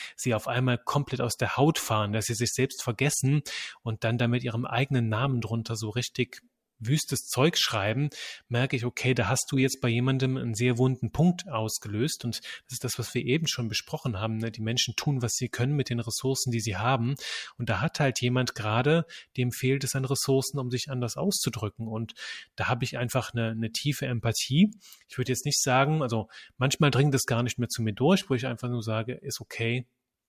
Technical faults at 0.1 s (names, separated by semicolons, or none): none